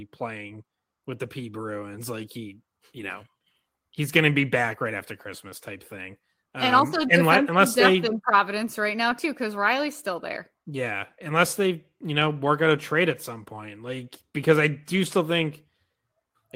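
Lost packets rebuilt from error correction at 2.97 to 3.03 s, 4.39 s and 5.49 s: the decoder filled each loss with the next packet's low-bitrate copy, leaving no gap but briefly rougher, noisier speech. The first patch spans about 40 ms, which fits two lost packets.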